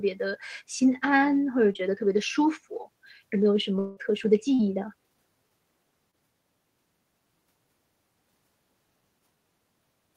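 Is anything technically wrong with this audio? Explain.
Yes, there are a few transmission glitches in this speech.

Short concealed packet loss shows up three times: 1.73 to 1.77 s, 4.55 to 4.61 s and 6.11 to 6.15 s. Each time about 20 to 40 ms of audio didn't reach the decoder in time, so the receiver patched the gap by extending the last bit of sound and then blending back into the real signal. You hear each one as a quick smear or tiny wobble, and the middle one is the longest.

At 3.79 to 3.99 s there's a longer break of about 180 ms, most likely a long network dropout. Almost all of that stretch is filled with a synthetic continuation of the preceding sound, a buzzy or hissy tail that fades rather than dropping to silence. Then the speech picks up again, and the part that went missing during that gap is simply gone.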